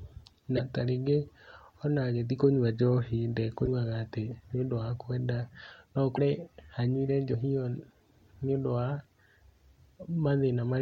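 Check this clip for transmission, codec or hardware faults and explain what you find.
Two codec faults turn up in the speech: three short glitches from a likely broken MP3 bit reservoir, and one place where compressed frames are skipped.

At 0.56 to 0.60 s, 3.65 to 3.68 s and 6.15 to 6.19 s the speech jumps forward and a brief chirp, noise burst or short hole of about 30 ms replaces it. The likely cause is a broken MP3 bit reservoir. After frames went missing, the next frame reached back for borrowed bits and decoded bytes belonging to a different 26.1 ms frame.

At 7.33 s the speech lurches ahead by roughly a tenth of a second, about four frames, with a brief smeared blip at the join and no hard click. Compressed frames were skipped here, and the overlap between neighbouring frames blurs the seam.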